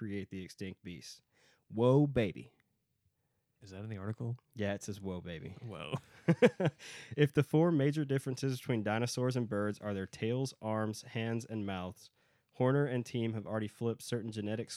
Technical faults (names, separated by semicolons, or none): none